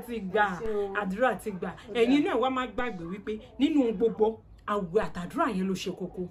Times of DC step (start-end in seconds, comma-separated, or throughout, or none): 0.66, 2.79, 5.03